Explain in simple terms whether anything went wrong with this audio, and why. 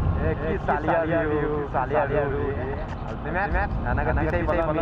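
Something did go wrong: from start to finish the audio contains a doubled audio track. Every sound is followed by an identical copy roughly a fifth of a second later, at about the same loudness, so everything has a flat, stuttering echo. Unlike a natural echo, the copy doesn't fade or take on any room character. The likely cause is the same signal being recorded twice, once through a slower route that lags behind.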